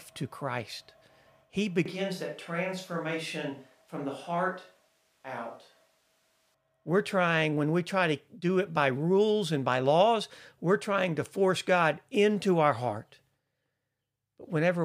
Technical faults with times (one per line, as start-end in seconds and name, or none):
1.86-6.54 switch to a distant microphone